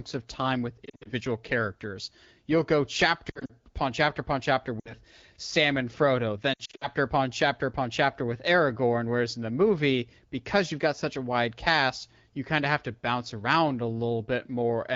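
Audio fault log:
0.85–1.09 s, lost AMR speech frames: About 140 ms of audio drops out in short bursts, none longer than 60 ms. The decoder repeats the last good frame at falling level. The speech warbles and thins, then returns rough.
3.29–3.52 s, lost AMR speech frames: Similar scattered gaps totalling 120 ms. Each one briefly dips the speech.
4.79–4.94 s, lost AMR speech frames: 60 ms lost. The sound smears and dips.
6.54–6.87 s, lost AMR speech frames: The longest stretch, 180 ms lost over 280 ms. It gives repeated dips and warbles in the wideband speech.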